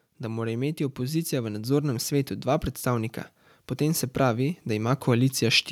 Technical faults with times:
0.20-5.67 automatic gain rising

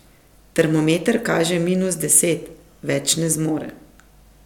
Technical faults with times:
none

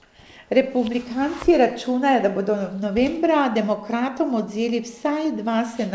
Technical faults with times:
none

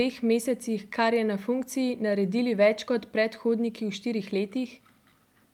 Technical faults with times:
none

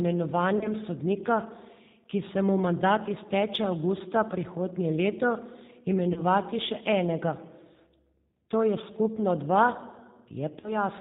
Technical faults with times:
0.00-11.01 G.729 codec
0.58-0.69 VoIP packet loss concealed by the speech codec
6.13-6.20 VoIP packet loss concealed by the speech codec
10.60-10.79 VoIP packet loss concealed by the speech codec

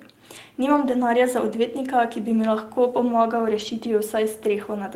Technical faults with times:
0.85-0.95 lost packet rebuilt from error correction
3.59-3.73 lost packet rebuilt from error correction

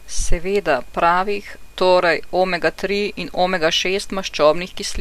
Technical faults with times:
none

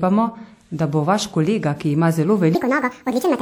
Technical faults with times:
2.55-3.42 section at the wrong speed

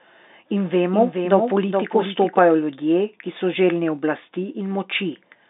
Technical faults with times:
0.93-2.39 doubled audio track

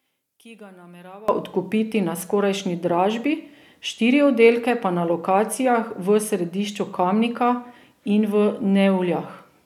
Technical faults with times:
0.00-1.28 one channel inverted

